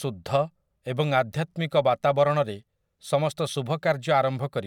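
No technical faults are audible in this speech.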